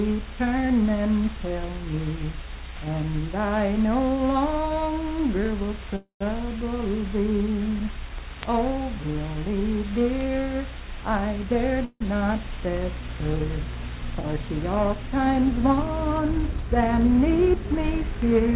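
The audio comes through a call path with nothing above 4 kHz, which points to G.711 mu-law at 64 kbps. There are two call audio freezes. At 5.96 to 6.23 s, the last sound carries on as a fading buzz or hiss for 245 ms, with about 120 ms of near silence. At 11.85 to 12.02 s, a 158 ms stretch fades, with about 30 ms silent. Both likely come from delayed packets draining the jitter buffer. The audio then resumes where it stopped, so nothing is lost, but the delay grows. There are also two jitter buffer speed-ups. From 11.04 to 11.72 s, the audio runs about 16% fast at unchanged pitch, with roughly a tenth of a second cut out in small pitch-period pieces. From 14.76 to 15.35 s, it runs about 6% fast, shedding around 40 ms. Each time, the receiver is trimming excess buffered delay, so the sound feels briefly hurried.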